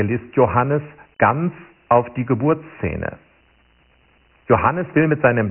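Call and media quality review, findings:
Dialogic VOX ADPCM, whole clip: gritty hiss riding on the speech, heavy codec damage, nothing above 3.1 kHz. Points to 4-bit OKI ADPCM at 24 kbps, 6 kHz rate. Spectrogram: hard ceiling near 3.1 kHz, noise floor lifting under voiced energy.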